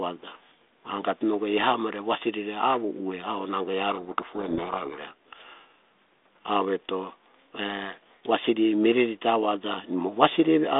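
From 3.9 to 4.99 s a codec payload misread buries the speech in harsh distortion: the decoder takes the G.726 code words in the wrong bit order.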